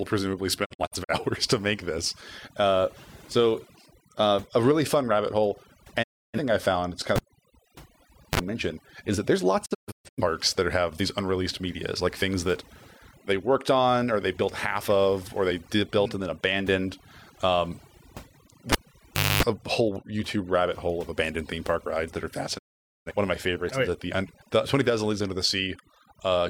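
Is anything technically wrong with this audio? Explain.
Yes. Overdone noise removal runs throughout: over-aggressive spectral gating drops bands near the noise floor, leaving twinkling specks rather than steady hiss.

Digital broadcast dropouts at 0.64–1.14 s, 6.02–6.39 s, 9.64–10.22 s and 22.57–23.12 s: the receiver mutes on failed frames, with 20 ms fades and short scattered holes in the first and third, and no pops or buzz.

A cable pulled and plugged in at 7.16–8.40 s and 18.72–19.43 s pops, goes near silent, then buzzes at 50 Hz mains as the tip touches, unlike the clean digital mutes.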